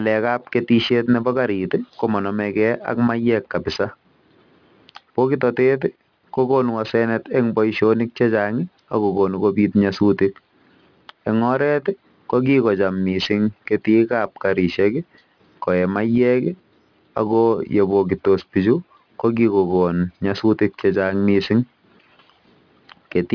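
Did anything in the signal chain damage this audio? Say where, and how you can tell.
Yes. Sibilants throughout the speech sound gritty and metallic, with unrelated tones mirrored below 5.5 kHz, roughly 25 dB under the signal. This is aliasing at sample-rate conversion: 48 kHz became 11 kHz without an anti-aliasing filter, so everything above 5.5 kHz folded back.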